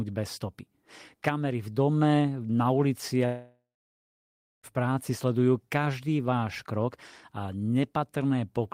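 Speech clip with a long network dropout, likely: audio stopped arriving after "v dome na" at 3.25 s, so the receiver stretched the last sound into a fading buzz before about 0.99 s of silence, resuming at 4.66 s on "práci sledujú každý váš" with roughly 1.4 s lost.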